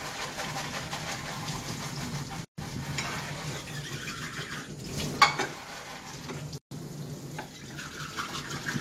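Sound, joined from separately encoded pieces without trimming encoder padding: a gap at a join of encoded pieces cuts in 133 ms gaps at 2.45 s and 6.58 s, every 4 s.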